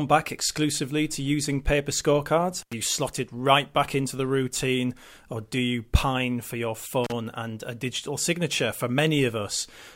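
Brief crackling dropouts cut the speech at 2.6 s, after "to using paper scorecards", for about 89 ms, and at 7.04 s, after "you pine for your", for about 34 ms: an intermittent contact opening momentarily.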